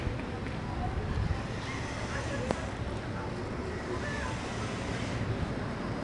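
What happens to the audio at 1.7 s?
At 1.7 s, as throughout, the audio is coded as 4-bit ADPCM, storing each sample as a coarse adaptive step from a prediction. The resulting error is a gritty hiss riding on louder sound, and nothing is heard above 10.6 kHz, consistent with a rate near 22 kHz.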